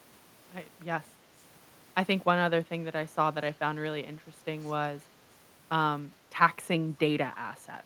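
At 4.62 to 4.72 s, an echo canceller at a loudspeaker end likely failed to remove what its microphone picked up, causing a brief echo leak: a very faint copy of the speech, 282 ms late, sits far beneath the main voice.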